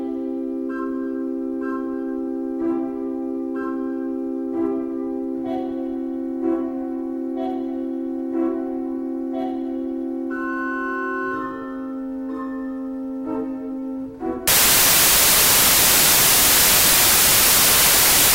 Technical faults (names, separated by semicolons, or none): samples built from the wrong bytes